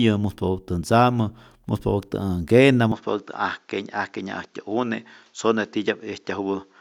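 Speech clip whose sound changes character abruptly at 2.92 s and stays that way to the end: content above 7.6 kHz vanishes, the tone turns duller, and a faint new noise floor appears roughly 45 dB down, with no gap and no obvious level jump. This likely reflects the input switching to a poorer device.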